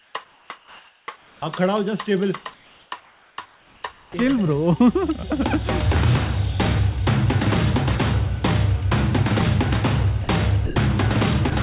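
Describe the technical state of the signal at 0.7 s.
At 0.7 s the background is comfort noise (0.00–1.42 s), likely synthetic fill during discontinuous transmission: steady, featureless hiss, an even, textureless spectrogram band below 4 kHz.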